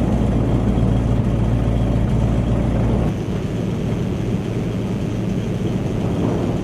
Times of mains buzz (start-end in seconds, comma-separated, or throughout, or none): 2.98-6.63